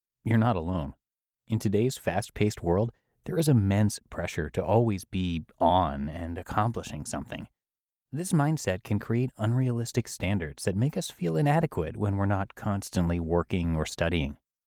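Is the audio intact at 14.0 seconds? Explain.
Yes, the audio is intact at 14.0 seconds, with no audible fault at that moment.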